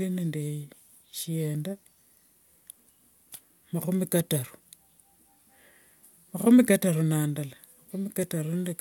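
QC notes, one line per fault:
Nothing to flag here; the speech runs along with no audible trouble anywhere I listened.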